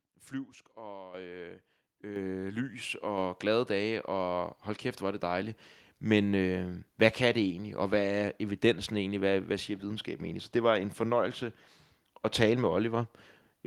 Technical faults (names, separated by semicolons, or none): microphone volume stepped up